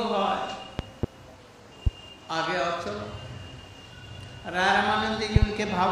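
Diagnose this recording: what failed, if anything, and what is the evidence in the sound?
Loud pops occur at 0.79–1.06 s (a pair), 1.87–1.89 s (one) and 5.36–5.45 s (a pair), around 20 to 25 dB above the sound, which continues underneath. The likely cause is sudden voltage steps entering the analogue wiring, shaped by downstream circuitry.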